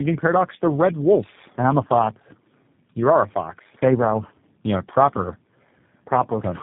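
Throughout the speech, tandem speech coding is audible: three low-rate speech codecs in a row, consistent with AMR-NB, GSM full rate and G.729A joined by G.711 links, each re-encoding the previous one's output. The result sounds rough, muffled and warbly, with nothing above 3.6 kHz.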